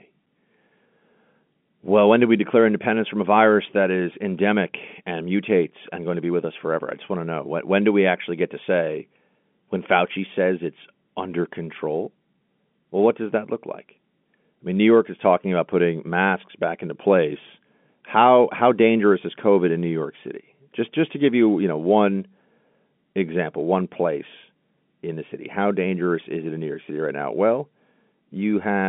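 No technical faults are audible.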